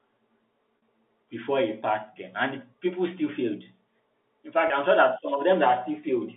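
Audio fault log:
0.78–0.82 s and 4.68–4.70 s, packet loss with pitch repetition: the sound briefly holds a slightly buzzy, frozen tone for about 40 ms and then 20 ms. Missing audio, which fits two lost 20 ms packets and then one, was bridged by repeating the last pitch period, through the G.711 telephone band.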